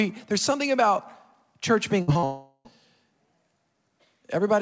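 At 2.02 to 2.09 s a burst of packet loss removes about 60 ms of speech. The receiver covers roughly 55 ms of it by extending the last sound and fading it, heard as a brief held buzz or fading hiss before the speech jumps forward.

Two short concealed packet losses follow, at 2.13 to 2.17 s and 2.19 to 2.24 s, losing about 20 ms and 40 ms. Each hole is patched by continuing the preceding sound and blending back, leaving a quick smear or wobble in the speech.

From 2.24 to 2.67 s comes a long network dropout, likely a stall in arriving packets. About 400 ms is lost. The receiver stretches the last sound into a decaying buzz or hiss for most of that span, and about 40 ms of silence precedes the return of speech further on. Throughout the clip nothing is present above 8 kHz, consistent with a wideband call codec such as G.722.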